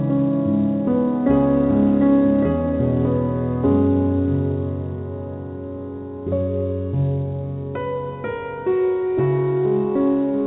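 No technical faults occur anywhere in this recording of sounds. It has come through a WebRTC call path that is working as intended, and the absence of any content above 4 kHz, along with a layer of coding noise, points to a narrowband telephone codec such as G.711 A-law at 64 kbps.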